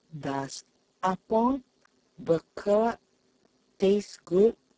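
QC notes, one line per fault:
Throughout, Speex codec: the speech sounds hoarse, noisy and edging toward robotic. This CELP coder has so few bits for the excitation signal that it can only roughly approximate it. Damage this heavy points to a very low setting, around 6 kbps.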